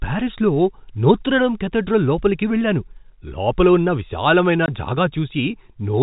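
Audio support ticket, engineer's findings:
Packet loss filled with silence at 4.66 s, right after "వెళ్ళాను లోపల ఉన్న విశాలమైన": single 20 ms hole in speech, hard-edged. One lost packet at the receiver/jitter buffer, gap zero-filled, no concealment. G.711 telephone path, nothing above 4 kHz.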